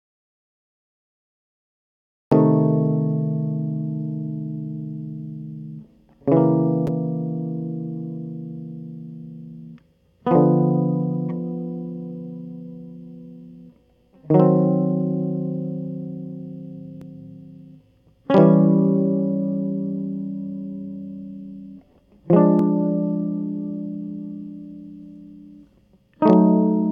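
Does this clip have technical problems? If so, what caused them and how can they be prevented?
Yes. There is an audio dropout to silence from the very start until 2.32 s: the music only comes in at that point, and everything before it is dead digital silence with no room tone or hiss at all. That flat silence likely means the input was lost, through a disconnected source, a failed link or a mute left on, while the recorder kept writing empty samples. To prevent it, check the input connection and mute state, and watch the meters before recording begins.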